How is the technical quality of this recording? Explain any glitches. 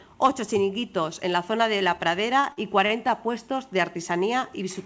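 The recording has one cluster of glitches. It sits on a call-type path whose content stops at 8 kHz, which fits a wideband codec such as G.722 at 64 kbps.

From 2.40 to 3.12 s there is repeated packet loss, which gives a robotic sound. Four gaps fall close together, the longest 40 ms. The receiver filled about 111 ms by stretching the preceding audio, but about 60 ms was simply lost, so roughly 16% of that stretch is concealed. The result is choppy, with fragments missing. A single dropout would leave one clean hole. Here the repeated patches stutter in quick succession.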